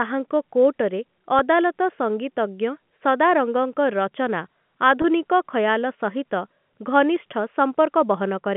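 A brief held, buzzy sustain at 1.39 s and another from 5.02 to 5.04 s come from packet loss with pitch repetition. About 10 ms and then 20 ms of audio went missing, and the receiver repeated the last pitch period across each gap.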